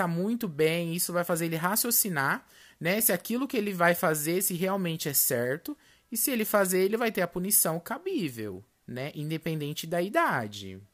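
Nothing technically wrong turns up anywhere in this speech recording, so there's no fault to point to and no cause to chase.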